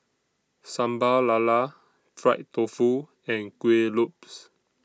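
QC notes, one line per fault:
Nothing to flag here; I listened through this speech clip and didn't catch anything worth writing up.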